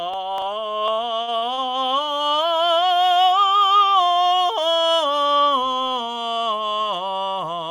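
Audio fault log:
1.17–1.69 s, repeated stalls (stutter): Packets kept reaching the receiver late, so its jitter buffer drained five separate times in about half a second. Each time it had to invent sound by carrying the last bit of music forward, about 141 ms in all, with the longest gap near 51 ms, roughly a quarter of the span. Nothing is lost, but the music lurches and hiccups, with held fragments and fades where the waits ran longer.
2.05–2.09 s, short stall from a late packet: One packet arrived about 20 ms behind schedule, leaving the jitter buffer empty at the moment it was needed. The receiver bridged the hole by stretching the preceding sound for about 20 ms, then resumed exactly where the music had paused once the packet landed. No content drops out, but a single moment hangs on slightly too long, heard as a brief smear with a faint buzzy or dipping quality.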